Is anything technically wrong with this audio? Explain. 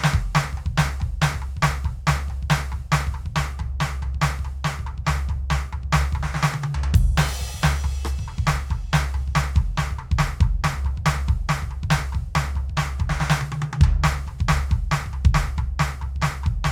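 No, nothing technically wrong can be heard here.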